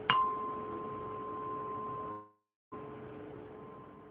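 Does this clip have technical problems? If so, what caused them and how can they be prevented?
Yes. From 2.11 s to 2.76 s there is a long network dropout. The last sound before the gap is stretched into a fading buzzy hiss, then about 320 ms of silence follows, and the audio resumes with roughly 600 ms of material simply gone. The likely cause is a run of lost or late packets that the receiver papered over with concealment until it gave up. On a spectrogram, smeared repeating bands fade into a blank column; the waveform shows a decaying envelope, then a flat line. A larger jitter buffer, forward error correction or a more stable network connection would prevent it.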